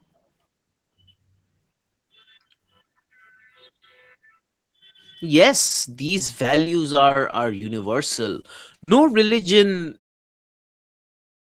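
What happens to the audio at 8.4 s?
At 8.41 s the speech briefly smears and wobbles for about 40 ms, to 8.45 s, and a short sound there may drop out. This is short concealed packet loss. About 20 ms of the call missed the decoder, so the receiver filled the gap by extending the preceding sound, from its pitch if voiced or as shaped noise if not, then crossfaded back into the arriving audio.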